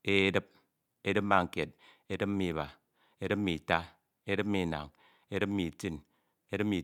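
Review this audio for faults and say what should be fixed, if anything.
No faults; nothing needs fixing.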